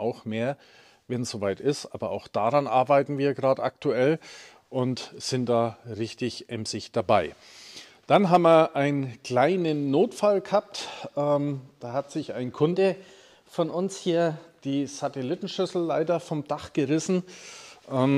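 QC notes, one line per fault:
12.73–14.60 s: wrong sample rate. Audio recorded at 44.1 kHz plays back at 48 kHz without conversion, running 1.09 times fast and about 1.5 semitones sharp.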